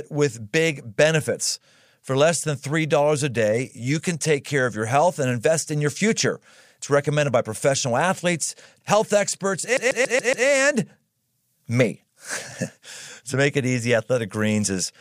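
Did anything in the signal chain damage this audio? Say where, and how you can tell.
Yes. A CD stuck on one turn damages the speech from 9.77 to 10.47 s, right after "professional athletes health experts". At the playback stage, the same 0.14 s slice of audio plays five times in a fast, even stutter, each repeat cut off by a short mute where the laser jumps. A scratch on the disc throws the pickup back one track at the same point on every rotation, so the player keeps rereading one revolution's worth of audio.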